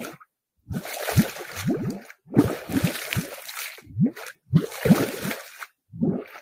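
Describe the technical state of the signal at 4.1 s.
At 4.1 s the signal is intact, with no technical fault audible at that moment.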